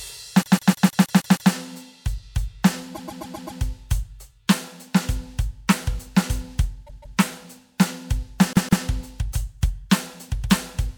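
Repeated frames make the music stutter from 0.41 to 1.50 s, 2.94 to 3.59 s, 6.86 to 7.17 s and 8.53 to 8.84 s. Blocks of about 0.16 s (0.13 s in the second) replay, adding time rather than dropping any.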